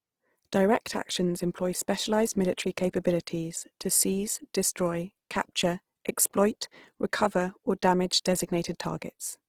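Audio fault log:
throughout Opus compression: grainy, rough speech, likely Opus CELT mode near 16 kbps filling starved bands with noise; spectrogram looks speckled and smeared, reaching 20.4 kHz.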